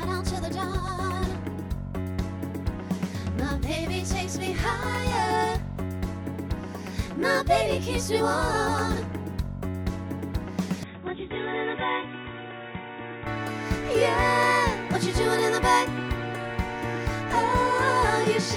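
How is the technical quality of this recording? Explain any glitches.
One glitch affects the technical quality. From 10.83 to 13.27 s the input was likely switched to a poorer device, whose path passes nothing above 3.8 kHz. The sound turns dull and boxy, drops a few decibels and picks up faint new background noise, then clears again, with no gap at either switch.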